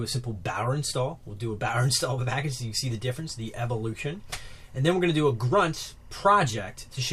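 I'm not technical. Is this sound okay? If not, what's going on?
No, not quite. From about 2.43 s to the end, there's timecode bleed: a sync signal from a nearby cable leaking in, heard as a quiet, steady chirping warble flipping between two high pitches, about 1 kHz and 2 kHz, behind everything else.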